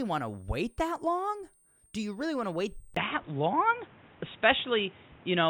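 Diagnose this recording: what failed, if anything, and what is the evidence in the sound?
Switching supply whistle, present throughout: a thin, high whistle sits between 8.2 and 9.5 kHz, centred near 10 kHz, at roughly 35 dB below the signal. The stage is analogue power and wiring. A switching regulator is dropping into an audible burst mode, or two supplies are beating against each other, and the ripple is coupling into the audio path.

Input switched to a poorer device, from 2.95 s to the end: after a 20 ms silence, the sound turns dull and boxy, with nothing above 3.8 kHz. A new noise floor appears around 30 dB below the signal, and the level shifts by about 5 dB. This points to the driver or device-selection stage. The likely cause is the system changing its input mid-recording to a narrower-band microphone or a headset's call profile, which brings its own tone, gain and background noise.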